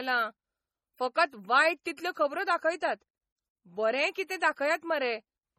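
Throughout the speech, heavy MP3 compression is the likely cause of a watery, swirling texture on sibilants, with weak spectral detail flickering in and out and nothing above 17.7 kHz. The damage fits a low bitrate near 32 kbps. Unlike plain low-pass filtering, the sound swirls rather than just dulling.

Pre-echo appears at 1.14 s, 1.84 to 1.86 s, and 1.97 s. A short hiss of roughly 14 to 20 ms runs just ahead of each sharp onset, because quantisation noise spread across the codec block fills the quiet gap before the attack. It comes before the transient, which distinguishes it from reverb or smearing after it.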